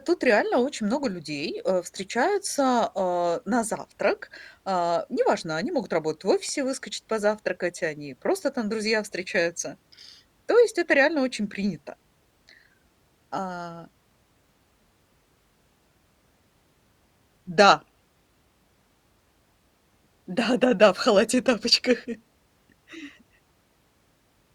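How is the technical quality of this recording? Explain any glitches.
The recording has one clear glitch, a short run of CD scratch ticks between about 5.83 and 6.49 s, right after "неважно они" and just before "выскочить позавтракать они просто". Six tiny ticks, the longest roughly a millisecond, arrive at an even pace of about nine a second. Each marks a point where a scratch passes under the laser on one rotation and wipes out more data than error correction can restore, so the player conceals the gap. Unlike random digital clicks, the ticks keep a steady rotational rhythm, though their strength is uneven.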